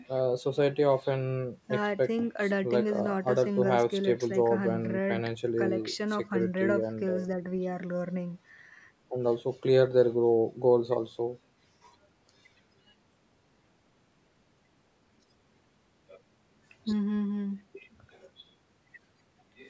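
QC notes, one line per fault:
Nothing stood out on listening, and the speech carries only the ordinary sound of call microphone processing.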